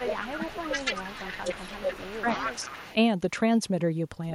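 From 0.0 to 2.48 s, the echo canceller likely mistook both talkers for echo during double talk and turned everything down, so the speech is suppressed in double talk, dipping by around 20 dB and breaking up over about two seconds. Overlapping that, at 0.27 to 0.36 s and again from 0.52 to 2.95 s, an echo canceller likely left residue, producing echo leak: a copy of the voice returns 294 ms late, about 15 dB below it.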